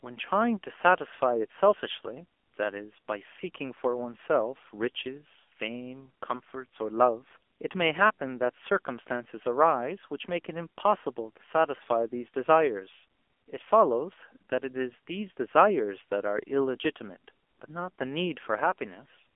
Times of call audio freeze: none

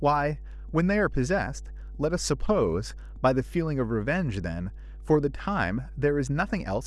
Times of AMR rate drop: none

